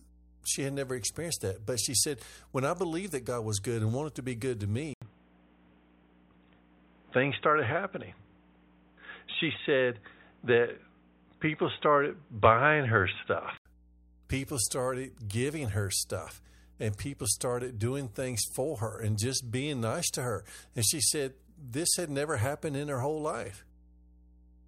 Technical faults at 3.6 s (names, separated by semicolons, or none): mains hum